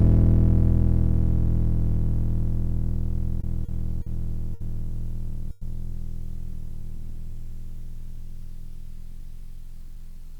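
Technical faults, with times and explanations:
3.41 s, 3.65 s, 4.02 s and 4.54 s: short stall from a late packet. Each time a packet arrived late, the jitter buffer emptied and the receiver held the last sound for 20, 30, 40 and then 60 ms before resuming from the same point, so the music briefly sustains with a faint buzz but loses nothing.
5.51 to 5.63 s: call audio freeze. The music stops moving forward for about 100 ms while the last sound carries on as a fading buzz, never dropping to silence. It then resumes exactly where it stopped, so a gap has been inserted with nothing lost, likely because packets were held up in transit and the jitter buffer ran dry.
6.54 to 7.16 s: jitter buffer slow-down. To rebuild its reserve, the receiver repeated short pitch periods many times over this stretch, adding 40 ms in total. The music plays at 94% speed with its pitch unchanged, so sustained sounds are drawn out.
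9.12 to 10.34 s: jitter buffer speed-up. With too much audio queued, the receiver repeatedly cut out short pitch periods, about 70 ms in all. The music runs at 105% speed at the same pitch, sounding slightly hurried, and the tempo no longer holds steady.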